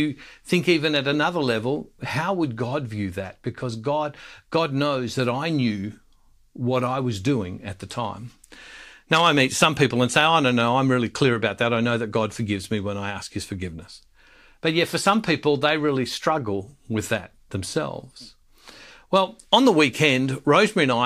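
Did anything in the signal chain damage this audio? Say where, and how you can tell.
No, nothing in this speech recording points to damage anywhere along the chain, so there's no stage to single out here.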